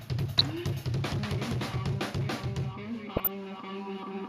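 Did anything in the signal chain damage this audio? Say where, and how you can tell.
Yes. Two short bursts of burbling sit over the sound at 0.38–0.50 s and 3.16–3.28 s. This is DAB burbling from weak reception: bit errors slipped past error correction into the MP2 data, putting short noise blips into single sub-bands across 6 and 7 frames respectively.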